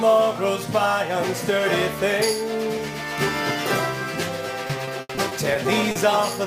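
Sample clock jitter runs through the whole clip. The converter's clock wanders by roughly 7 microseconds, so each sample is taken a little early or late, and the timing error becomes an amplitude error wherever the waveform changes quickly. The result is a grainy hiss about 20 dB below the signal that swells with loud, bright passages and disappears in quiet moments. Ordinary background noise, by contrast, stays at a constant level regardless of the material.

Repeated packet loss (robotic sound) occurs from 4.67 to 5.97 s. Seven gaps arrive in quick succession, the longest 80 ms, adding up to 220 ms and covering about 17 percent of that span. Each hole is patched by extending the preceding sound, so the passage turns choppy, with fragments missing. A single dropout produces one isolated break, and an underrun leaves gaps of silence. Here the breaks repeat closely and are filled with continued sound.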